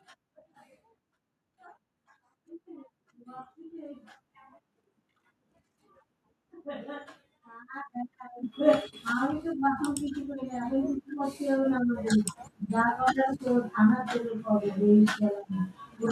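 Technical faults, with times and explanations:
8.43 s, microphone volume stepped up: the input gain rose by about 8 dB in one step, so speech and background noise both jump louder together.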